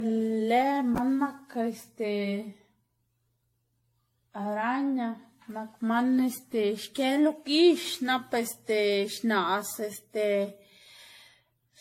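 From start to finish the speech sounds swirly, smeared and hollow, consonant attacks blur, and nothing reaches above 16.5 kHz. This is likely generation loss: around seven successive lossy encodes, consistent with 64 kbit/s AAC-LC, each stacking new quantisation noise and spectral holes.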